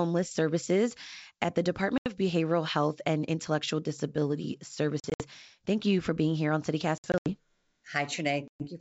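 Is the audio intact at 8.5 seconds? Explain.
No. Packet loss on an ADPCM call runs from 8.48 to 8.67 s: about 120 ms drops to hard-edged silence, and the resumed sound is slightly distorted while the decoder's predictor and step size resynchronise with the sender.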